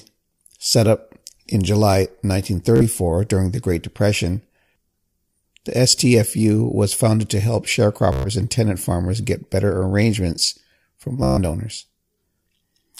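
Bluetooth stutter at 2.76–2.83 s, 8.13–8.29 s and 11.23–11.38 s: late packets force short buffer repeats, buzzing for roughly 46, 122 and 137 ms before speech resumes further on.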